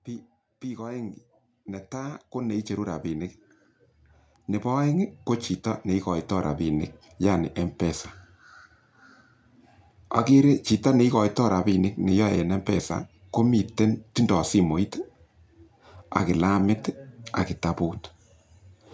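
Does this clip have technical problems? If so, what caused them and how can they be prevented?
Yes. Automatic gain rising from 0.05 to 3.35 s: the gain control judged the opening input too quiet and raised it by about 10 dB, so speech and background swell together. Keeping a steady, adequate mic level from the start, or fixing the gain instead of leaving it automatic, prevents this.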